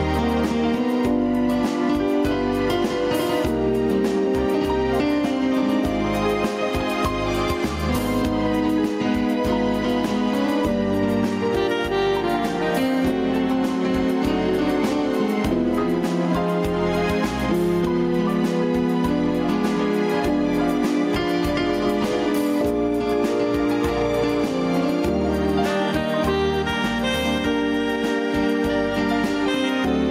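Throughout the clip the gain pumps, swinging by around 10 dB under loud sounds, leaving the audio squashed and flat in level. This is gain pumping, most likely from input gain set far too high, with a fast limiter or compressor clamping it on every peak.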